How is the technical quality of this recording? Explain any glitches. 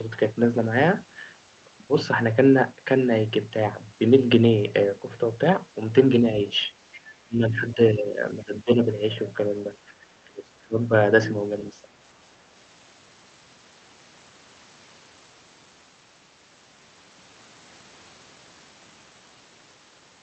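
The recording has echo-control problems during a stretch of overlapping talk between about 7 and 12 seconds.

Other side's voice leaking through, at 6.92–7.0 s and 7.55–7.6 s: the echo canceller likely left residual loudspeaker pickup, heard as brief, faint scraps about 25 dB below the speech.

Speech suppressed in double talk, at 7.25–8.18, 8.43–8.86, 10.25–10.45, 10.64–10.79 and 11.72–11.97 s: the canceller likely mistook the talker for echo and ducked the speech, producing dips of roughly 10 to 25 dB.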